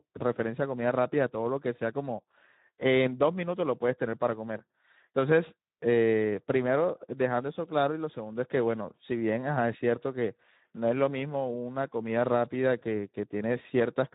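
Speex codec damage runs throughout: starved CELP excitation makes the speech hoarse and noisy, consistent with roughly 11 kbps, and nothing remains above 3.8 kHz.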